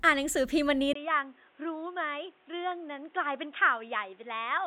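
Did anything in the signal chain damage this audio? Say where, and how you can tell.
Yes. From 0.93 s to the end, the speech turns abruptly dull and boxy, with nothing above 3.8 kHz, a brief 20 ms gap at the changeover, roughly 10 dB less level, and a new background noise sitting around 30 dB below the voice. At the driver or device stage, the input was likely switched to a poorer device: the system swapped to a narrower-band microphone or headset call profile mid-recording, bringing its own bandwidth limit, gain and noise floor.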